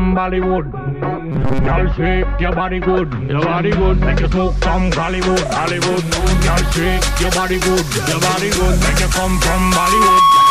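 Robotic sound from repeated short buffers appears from 1.32 to 1.72 s: the audio collapses into a rigid, metallic buzz at 134 Hz. The likely cause is new audio arriving too seldom, so a fragment of about 7.5 ms is replayed over and over in place of most of the real signal. A loudspeaker feedback squeal starts at 9.07 s and runs to the end at 10.50 s. A single tone at 1.1 kHz grows over about a second until it sits roughly 5 dB above the rest of the sound, as a microphone picks up its own loudspeaker and the loop gain at that frequency exceeds one.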